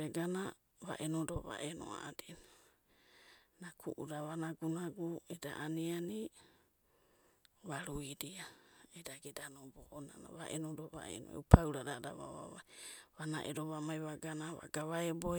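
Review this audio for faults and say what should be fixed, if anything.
No faults turn up in this audio, so nothing needs to be fixed.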